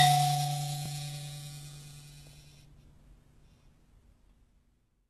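Across the whole music clip the top end sounds bright but false: treble detail turns gritty and plainly metallic, and nothing is heard above about 12.3 kHz. This is HE-AAC compression, likely at a very low rate, around 16 kbps. The encoder keeps only the lower spectrum and rebuilds the treble by copying lower bands upward under a coarse envelope, so upper harmonics no longer line up with those below.

At 0.86 s and again at 2.88 s there is a brief stutter, a small click where the music seems to trip over itself. These are overlapping chunks. The audio was handled in 2-second pieces, and each new piece began 25 ms before the previous one finished, so that short stretch plays twice at each join. The regular 2-second spacing between the two stutters shows the chunk boundaries.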